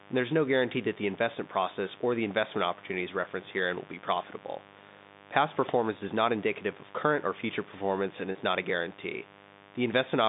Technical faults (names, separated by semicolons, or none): mains buzz; packet loss with pitch repetition